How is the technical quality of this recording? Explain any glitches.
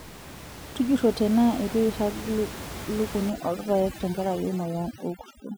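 The recording has one clear glitch, overdone noise removal, in the last stretch of the speech. From 3.3 s to the end at 5.57 s, the room noise, which sits about 12 dB below the speech before that point, drops and breaks up into twinkling specks. A noise reduction stage set too aggressively is cutting individual frequency bands whenever they come close to its noise estimate. The quieter parts of the speech are removed along with the background, and isolated bands flicker in and out, which produces the specks.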